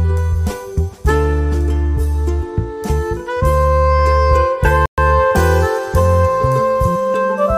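At 4.86 s the sound drops out to silence. It returns at 4.98 s, after a gap of about 122 ms. This is likely a Bluetooth stall. Radio interference delayed packets, the headphone buffer emptied, and playback paused until the resent data arrived.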